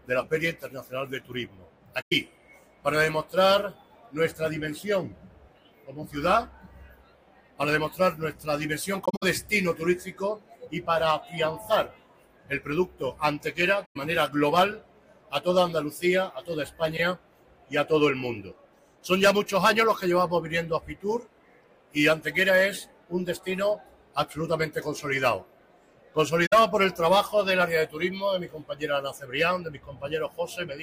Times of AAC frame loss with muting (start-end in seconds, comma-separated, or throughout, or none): 2.01-2.13, 9.05-9.23, 13.85-13.97, 26.46-26.53